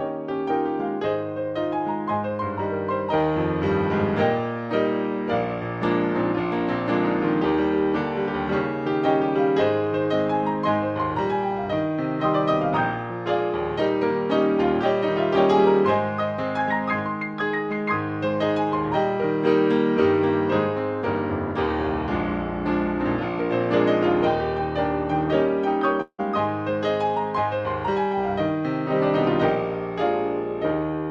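At 26.01 s the audio breaks off until 26.20 s in what sounds like a long network dropout. For about 170 ms the last sound is stretched into a buzzy, fading tail, then roughly 60 ms of near-silence follows before the signal resumes with about 180 ms of material gone. A likely cause is a run of packets that never reached the receiver. On a spectrogram, smeared repeating bands fade into a blank gap, and the waveform thins to a flat line.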